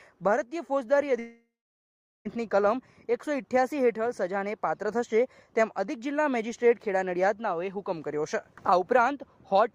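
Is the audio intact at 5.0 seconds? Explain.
Yes, at 5.0 seconds the audio is intact, with no dropout, click, distortion or other fault at that moment.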